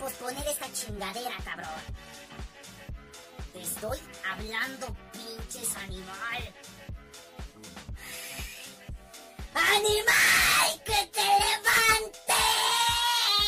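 Nothing technical goes wrong anywhere in this audio, so there's no fault to point to at any moment.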